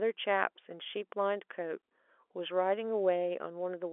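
No technical faults occur anywhere in the clip; the speech comes through G.711 telephone coding, with nothing above about 3.7 kHz.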